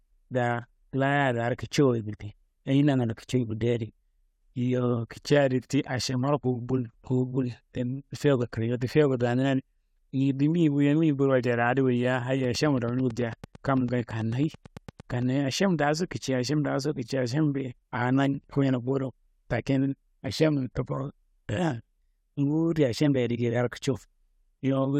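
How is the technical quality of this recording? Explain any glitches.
The recording has one clear glitch. From 12.44 to 15.23 s, a train of clicks ticks steadily, about nine per second, roughly thirty in all. Likely interference or a faulty connection or power supply. The clicks are about as loud as the speech.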